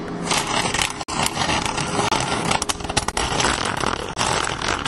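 At 1.03 to 1.09 s, 2.08 to 2.12 s, 3.12 s and 4.13 to 4.16 s, the sound stops dead for 51, 32, 18 and 29 ms. These are gaps between stream segments: successive one-second segments were stamped slightly apart, and the player fills each hole with silence. The hard-edged holes come about once a second. Unlike a dropout, nothing is missing. The sound resumes exactly where it stopped, so each gap adds time rather than removing audio.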